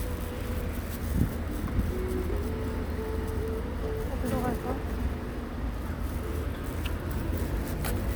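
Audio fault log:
No fault can be heard anywhere in this recording of sounds. Nothing in it calls for an entry in this log.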